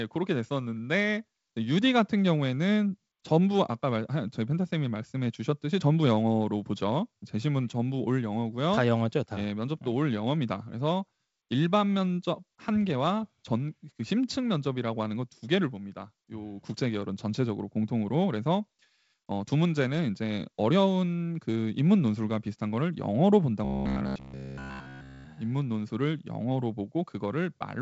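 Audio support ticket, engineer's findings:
Robotic sound from repeated short buffers, 23.65–25.25 s: rigid 66.8 Hz metallic buzz throughout, likely buffer starvation looping a ~15 ms block. Unlike codec warble, pitch stays fixed.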